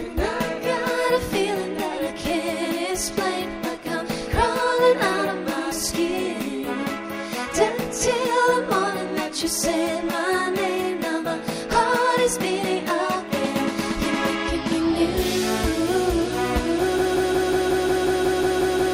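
The audio runs normally until about 16.98 s, where it falls into a broken-record loop: a fragment of about 181 ms repeats exactly, back to back, 11 times, and the loop continues to the end of the clip at 18.94 s. Whatever sound should have followed in those last two seconds is missing. The likely cause is a stalled player, encoder or stream that kept resending the last buffered fragment instead of delivering new audio.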